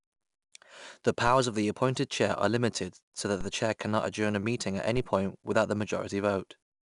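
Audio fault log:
Throughout: 4-bit ADPCM compression. Each sample is coded as a coarse 4-bit step from a predicted value, so the quantisation error rides along with the speech as a gritty hiss that swells on loud syllables and clear distortion on sharp consonant onsets where the step size lags. The grit fits a bitrate near 89 kbps. A spectrogram shows level-tracking noise filling the gaps between harmonics and nothing above 10.6 kHz.
1.27 s, 3.41 s, 4.97 s: DC step. At each moment the waveform's zero line jumps abruptly to a new offset, then drifts back to centre at the rate of a 5 Hz high-pass. Each jump is heard as a low thump under the speech, which carries on unaffected: just before "of the appointed chair", between "limited so that" and "the chair cannot adjourn", and between "adjourn a meeting at" and "point without the". The waveform shows a sudden baseline shift with an exponential tail. 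A spectrogram shows a brief broadband vertical stripe concentrated at low frequencies.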